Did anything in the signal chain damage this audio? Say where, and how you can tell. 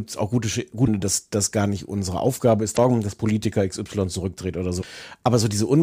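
Yes. Damaged data in a compressed stream, at the codec stage, breaks the speech three times, at 0.82 to 0.88 s (just before "dass das gar nicht"), 2.73 to 2.79 s and 4.80 to 4.85 s. Each is a brief, roughly 55 ms glitch, the decoder misreading corrupt frames and resyncing on the next header.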